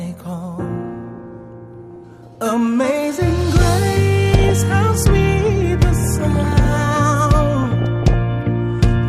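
Weak reception let bit errors slip past the error correction into the MP2 audio data, corrupting samples and scale factors so individual sub-bands jump in level for up to a frame. The result is DAB burbling, short blips of noise in single sub-bands over the programme, heard from 1.82 to 2.36 s, 4.32 to 4.61 s, 6.04 to 6.65 s and 7.62 to 8.14 s. The error rate is roughly 0.3 to 0.7 percent, highest in the second burst.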